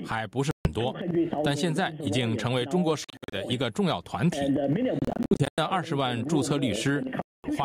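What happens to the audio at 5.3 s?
Between 4.99 and 5.59 s the sound breaks into a series of gaps, the likely result of a Bluetooth dropout. Packets failed to reach the headphones in time and were discarded, so the output fell silent until valid data arrived. About 336 ms of audio is missing across that 0.6 s stretch, with the longest single hole near 98 ms. Each time playback resumes, it picks up further along, as if the sound had continued underneath.

Gain pumping is also audible at 5.3 s, as it is across the whole clip. The input gain is set far too high, and a fast limiter or compressor likely clamps it down on each loud sound. The gain swings by around 15 dB. The level contrast is flattened and the sound has a squashed character.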